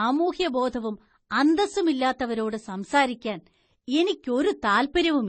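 From the very start and all the way through, the speech has nothing above 8.3 kHz, and two kinds of compression smear sit on top of each other. That's likely transcoding between lossy codecs, which fits a low-rate MP3 re-encoded as AAC-LC, each adding its own artefacts.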